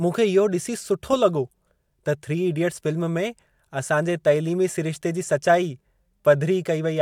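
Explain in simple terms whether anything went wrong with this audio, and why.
Nothing went wrong here: the speech recording comes through without any technical faults.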